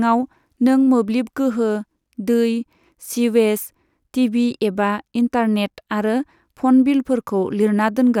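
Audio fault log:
No technical faults can be heard in this speech recording, and the signal stays intact throughout.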